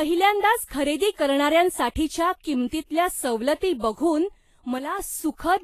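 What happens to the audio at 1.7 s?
At 1.7 s the speech sounds hissy and grainy, with nothing above 14.2 kHz, as throughout the clip. This is likely Vorbis compression at a low bitrate.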